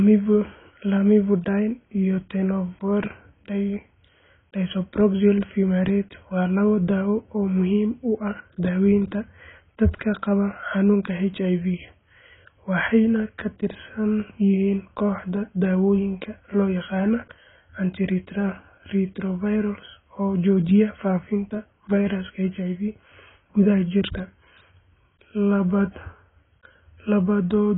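Throughout the speech, everything above about 3.8 kHz is missing, leaving it dull and muffled, with a warbling, smeared texture on sustained sounds and sibilants. This points to heavy AAC compression, likely AAC-LC at a bitrate around 16 kbps, which lowers the cut-off and quantises coarsely.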